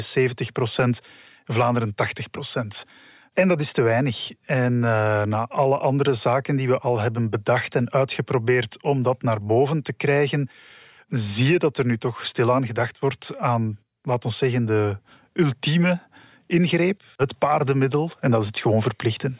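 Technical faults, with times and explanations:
No technical faults detected in the speech recording.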